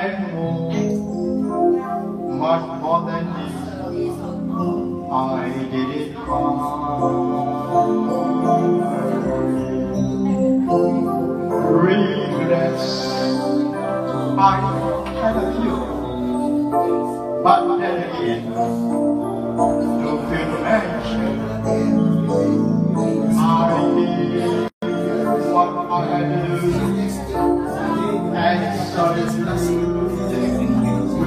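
At 24.68 s the sound drops out for about 144 ms, until 24.82 s, which is a gap at a join of encoded pieces. It seems two separately encoded sections were butted together without trimming, so the encoder's start-up delay and the padding on the last frame both stayed in. You hear a hole with smeared edges, and then the sound resumes exactly where it left off.

Then from 29.29 to 29.31 s there's a single loud pop, standing roughly 10 dB above the surrounding sound. It's a short, hard click-thump sitting on top of the audio while the sound carries on underneath. The likely cause is a sudden voltage step or spike, from a plug, a switch, static or a driver glitch, which the downstream circuitry shaped into that brief burst.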